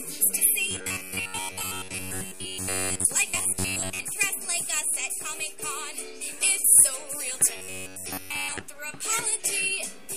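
From 0.71 to 3.05 s, then again from 3.30 to 4.05 s and from 7.57 to 8.61 s, the sound goes robotic: a rigid, metallic buzz pinned at about 94 Hz that still loosely tracks the underlying audio. That's the robotic sound from repeated short buffers, likely caused by audio arriving too slowly so the last roughly 11 ms chunk gets looped, with most of the real material in those stretches skipped.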